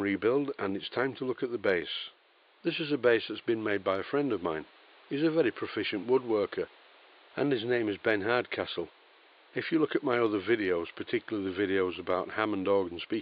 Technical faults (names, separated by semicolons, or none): none